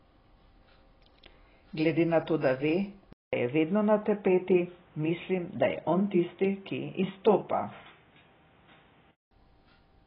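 Throughout, the speech sounds dull and smeared, with a fizzy warble and nothing above 5.2 kHz. This is likely heavy AAC compression, pointing to roughly 18 kbps AAC-LC. At 3.13 s a 200 ms silence opens a boxier stretch, capped at 3.8 kHz with faint new background noise, until 9.31 s. The input was likely switched to a poorer device.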